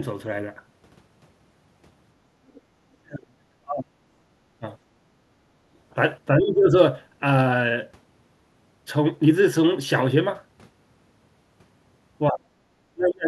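Other side's voice leaking through appears from 2.48 to 2.61 s as a faint second voice about 30 dB under the speech, likely loudspeaker echo the canceller missed. It shows as a weak, separate harmonic trace on the spectrogram.

Speech suppressed in double talk follows at 2.89–4.35 s, 5.2–5.34 s, 6.34–6.75 s, 12.3–12.56 s and 12.93–13.27 s. The voice dips by roughly 20 to 40 dB, deepest in the first stretch, likely because the canceller turned both sides down at once. These appear as hollowed waveform sections and faded spectrogram bands.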